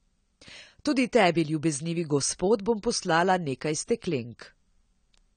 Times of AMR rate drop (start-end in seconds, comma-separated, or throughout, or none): none